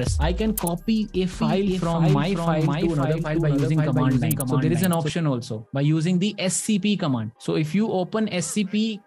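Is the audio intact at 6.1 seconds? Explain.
Yes, the audio is intact at 6.1 seconds, with no dropout, click, distortion or other fault at that moment.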